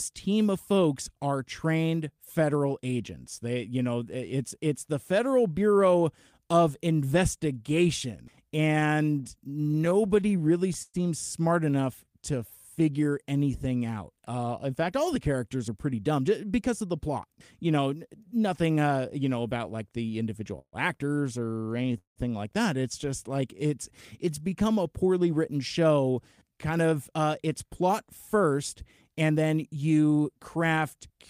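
The first trouble is repeated stalls (stutter) from 8.27 to 10.97 s. The speech keeps catching, 23 little hang-ups in all, the longest 114 ms, adding up to 333 ms of filled-in sound, about 12% of that stretch. Packets were trickling in slower than playback, so the jitter buffer kept running dry and the receiver stretched the last sound each time. Nothing's lost, but it drags and judders.

Right after come two bits of jitter buffer slow-down, 12.04 to 12.39 s (running at 91%, 42 ms added) and 12.80 to 13.88 s (89%, 123 ms added). The receiver was topping up its reserve by repeating single pitch periods over and over, so the speech sounds drawn out at the same pitch.

Then from 15.68 to 19.06 s there's a jitter buffer speed-up at 109%, shaving off roughly 300 ms. The buffer had more than it wanted, so tiny pitch-period-sized chunks got cut again and again. Same pitch, just hurried.

At 20.59 to 20.76 s there's a brief call audio freeze: the sound hangs as a fading continuation for 134 ms, about 70 ms of it gone silent, then picks up exactly where it left off. 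That points to packets likely held up in transit, leaving the buffer briefly empty, with the whole stream pushed back by that 134 ms.

Another stutter follows, 21.41 to 22.19 s, heavier this time: 11 gaps, one as long as 179 ms, 272 ms filled, about 35% of the span concealed, so it really stumbles.

A further slow-down runs 23.05 to 24.84 s at 92%, with 147 ms added, giving that same stretched, slightly laboured delivery.

Finally, 26.51 to 31.12 s is another speed-up at 107%, again trimming roughly 300 ms, so the last stretch feels rushed without any change in pitch.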